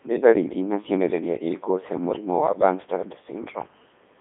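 Speech heard through a Codec 2 vocoder for the whole clip: the voice sounds robotic and buzzy, resynthesised from sine waves at pitch harmonics. The spectrogram shows clean harmonic stripes, nothing above 3.7 kHz, and a waveform unlike the original, consistent with the 3.2 kbit/s mode.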